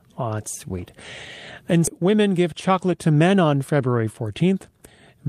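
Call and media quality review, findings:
Skip ahead, 1.87–1.89 s. Speech jumps forward with no fill, so about a second of audio is missing and the two sides are joined almost directly. Points to the jitter buffer or transport discarding a delayed stretch while later packets were queued, cutting latency by roughly a second in one step.

Jitter buffer speed-up, 2.01–3.45 s. Speech runs about 9% fast at unchanged pitch and sounds hurried. The receiver's buffer held excess audio after the jump and trimmed short pitch-period pieces repeatedly, removing roughly 150 ms in total to pull playout delay back toward target.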